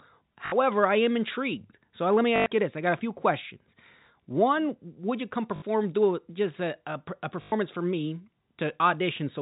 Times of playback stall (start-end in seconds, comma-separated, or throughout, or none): none